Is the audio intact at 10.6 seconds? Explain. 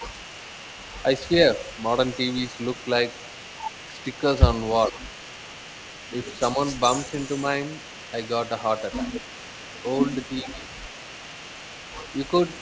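No. From 10.42 to 10.71 s, speech is suppressed in double talk: with both sides likely talking at once, the echo canceller couldn't tell the near talker from loudspeaker echo and turned both down. The voice dips by around 10 dB for that span.

There is also an echo leak throughout the clip, including this moment. Residual loudspeaker pickup likely escaped the far end's echo canceller and returned, so a faint copy of the speech trails about 420 ms behind, well below the main voice.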